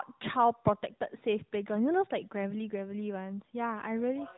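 Nothing stood out as a technical problem on listening to this speech recording.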